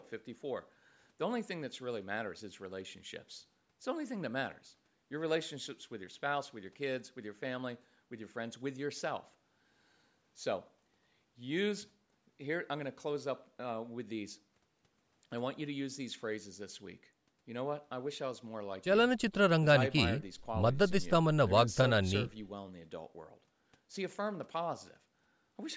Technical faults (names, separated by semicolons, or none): none